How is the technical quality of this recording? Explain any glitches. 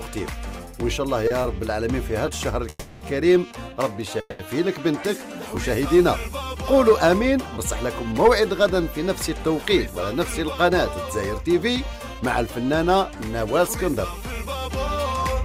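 The recording has network delivery glitches: two brief stalls, two freezes and a late stretch that plays slightly fast.

Short stall from a late packet, at 1.27 to 1.32 s and 1.42 to 1.46 s: the sound is held an extra 30 ms, then 20 ms, because the jitter buffer emptied briefly while waiting for a packet.

Call audio freeze, at 2.69 to 3.03 s and 4.20 to 4.41 s: the last sound is stretched into a fading fill, ending in about 20 ms of silence, before the audio resumes. This is likely held-up packets draining the jitter buffer.

Jitter buffer speed-up, from 9.61 s to the end: the audio runs at 104% speed, pitch unchanged, as the receiver trims tiny pitch-period slices, roughly a fifth of a second in total, to cut delay.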